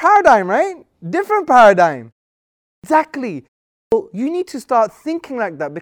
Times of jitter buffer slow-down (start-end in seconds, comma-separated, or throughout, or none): none